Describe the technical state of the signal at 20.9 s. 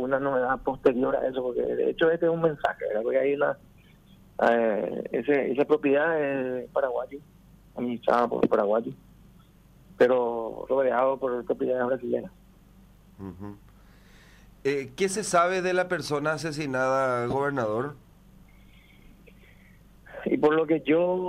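Around 20.9 s the signal is intact, with no audible fault at that moment.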